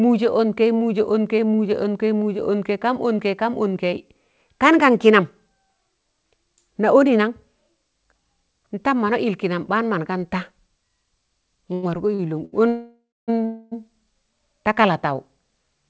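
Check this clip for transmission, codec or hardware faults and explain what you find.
Several transmission faults cluster in the last four seconds of the speech, all typical of network delay on a call. The audio is band-limited with nothing above 8 kHz, which fits a wideband call codec such as G.722.

Short stall from a late packet, at 11.74 to 11.85 s, 12.15 to 12.21 s and 12.45 to 12.54 s. Each time a packet arrived after it was due, so the jitter buffer emptied and the receiver extended the last sound, by 88 ms, 40 ms and 73 ms, until the data came in. Nothing is lost. A syllable is simply held too long, with a faint buzz or dip.

Call audio freeze, at 12.68 to 13.30 s and 13.46 to 13.74 s. The audio halts and the last sound is drawn out into a fading buzz. In the first, longer freeze this falls to about 250 ms of silence. The likely cause is packets held up in transit, draining the jitter buffer. 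Playback then resumes where it stopped, so about 0.6 s and 0.26 s of gap are inserted rather than speech being lost.

Jitter buffer slow-down, at 14.54 to 15.08 s. After the stalls the receiver rebuilt its reserve by repeating single pitch periods and bits of pause, adding about 39 ms. Speech in this stretch plays at roughly 94% speed with unchanged pitch, so sounds seem slightly drawn out.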